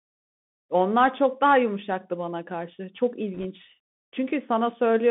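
Throughout, the speech carries the sound of a Bluetooth CVSD headset codec. The band runs only from about 200 Hz to 3.6 kHz. The one-bit delta modulator's adaptive step lags loud, bright sounds, which makes s sounds scratchy and leaves a granular hiss beneath everything.

From 3.34 to 3.46 s, bit errors on the Bluetooth voice link, at an error rate of around one percent, add a brief rushing crackle. Each flipped CVSD bit weighs no more than any other and its error grows with the speech level but fades quickly, so there are no sharp clicks.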